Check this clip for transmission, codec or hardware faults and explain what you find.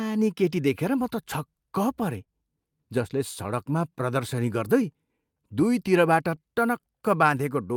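There are three related timing faults, all from the two ends of the link not agreeing on time.

Clock drift between sender and receiver runs through the whole clip. The sender's clock is about 2% slow, so the receiver's jitter buffer keeps draining. You hear a faintly uneven pace rather than anything broken, as the receiver keeps patching the shortfall.

Repeated timing corrections from 0.74 s to 7.42 s are how it patches it. The receiver keeps repeating tiny slices to stretch playback, adding roughly a tenth of a second overall, so the speech runs at 99% speed with slight, irregularly spaced hiccups.

There's a short stall from a late packet at 2.24 to 2.29 s. The buffer ran dry, so the receiver held the last sound for 23 ms until the packet turned up. Nothing's lost, but that moment sounds briefly frozen, with a slight buzz or dip.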